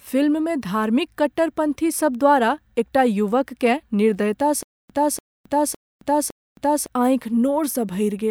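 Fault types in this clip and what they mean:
Stutter with silent gaps: From 4.63 to 6.86 s, a 290 ms fragment repeats four times between 268 ms silences. A stalled stream is the likely cause.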